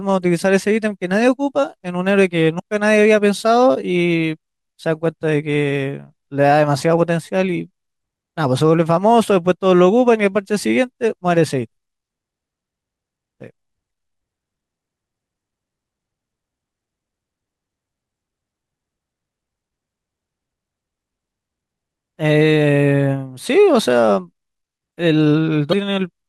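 At 2.56 s there's a short glitch lasting about 40 ms, and the same thing turns up again near the end at 25.69 s. Both are damaged data in a compressed stream. A patch of the encoded bytes got corrupted, so the decoder misread those frames, lost its sync and had to hunt for the next valid frame header. What you hear is a brief chirp, squawk, click or short hole cutting across the speech.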